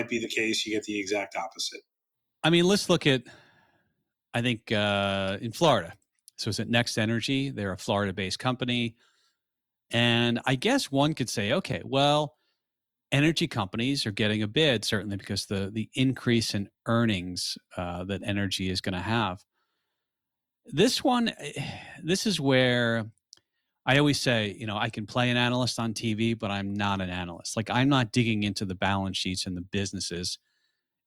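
Listening closely to the speech recording, nothing technical stood out at any point.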